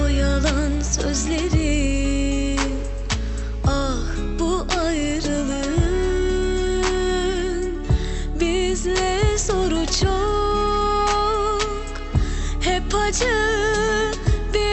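No technical faults are audible.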